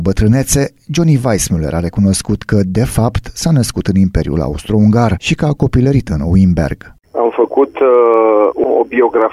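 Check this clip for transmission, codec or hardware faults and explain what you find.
The clip has one fault: clock slip clicks running from 0.10 s to 9.29 s. Faint ticks recur roughly every 40 ms, some two hundred in all, merging into a light rattle that is clearest where the sound is loud and bright. The likely cause is two unsynchronised clocks differing by around 500 ppm, so a single sample is dropped or repeated each time the drift accumulates. A spectrogram shows evenly spaced thin vertical lines, and the zoomed waveform shows tiny one-sample steps.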